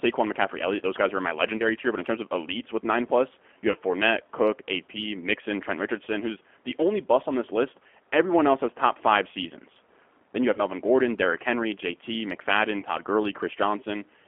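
Throughout, the speech passes through a G.729 codec at 8 kbit/s, rebuilding each frame from a vocal tract filter and a handful of pulses inside a roughly 250 Hz to 3.4 kHz line band. The result is thin, slightly rough and synthetic, with plainly audible codec damage.

VoIP packet loss concealed by the speech codec occurs four times. At 1.57 to 1.65 s, between "guys are in my" and "tier but in terms", at 3.71 to 3.76 s after "with nine plus you", at 10.54 to 10.61 s, and at 12.79 to 12.84 s, about 30 ms of audio goes missing, which fits a single lost packet each time. The decoder fills each gap by extending its last pitch and filter at falling gain, so the speech smears into a brief buzzy tone or coloured noise that fades, and stays weak for a moment as the decoder recovers.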